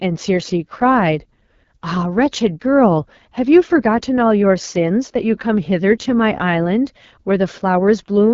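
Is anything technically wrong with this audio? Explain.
Yes. Throughout, the speech sounds rough and raspy, with nothing above about 7.3 kHz. This is AMR wideband (HD Voice) codec damage: a low-rate, model-based coder rebuilds the voice from a pulse-driven vocal tract model, and the plainly audible coarseness fits its low 8.85 kbit/s mode.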